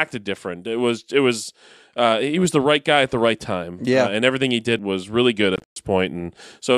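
A speech recording with a break in the audio from 5.56 to 5.76 s, immediately after "did was really good". Across that 0.2 s span the output cuts to silence in abrupt gaps totalling about 0.16 s, the longest lasting about 0.12 s, and the speech resumes further along as though it had kept playing. This is a Bluetooth dropout, likely caused by packets failing to reach the headphones in time and being discarded rather than played late.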